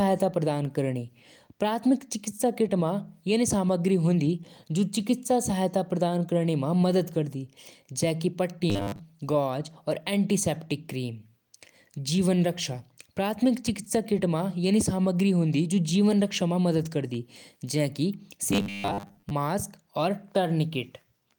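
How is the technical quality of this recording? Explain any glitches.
Two short glitches spoil the speech, both robotic sound from repeated short buffers. At 8.70 to 9.01 s and 18.53 to 19.31 s the voice turns into a metallic 100 Hz buzz, likely from a roughly 10 ms buffer looping while most of the real audio was skipped.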